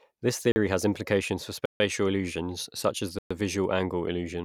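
Three blocks of digital silence cut into the speech, at 0.52 s for 40 ms, 1.66 s for about 145 ms, and 3.19 s for 120 ms. The sound cuts out and back with no fade. The first is a brief gap, the longer two clear holes, likely from the output buffer not being filled in time.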